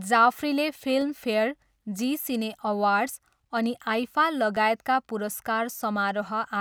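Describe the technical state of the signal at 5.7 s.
At 5.7 s the signal is intact, with no audible fault at that moment.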